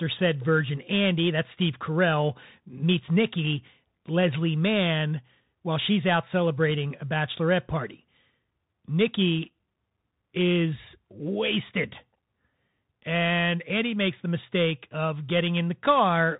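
Throughout, the speech carries plainly audible Bluetooth CVSD headset codec damage. The one-bit up-or-down coder, which fits a 64 kbps link, passes nothing above 3.8 kHz, leaving a flat spectrogram ceiling. Loud highs outrun its adaptive step, s sounds turn scratchy, and granular hiss lies beneath.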